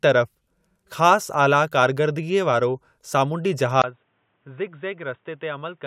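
At 3.82 s the speech drops abruptly after a brief 20 ms gap, then stays dull and boxy to the end, with nothing above 3.8 kHz, level down about 10 dB and new noise about 40 dB below. This is likely an input switched to a poorer device.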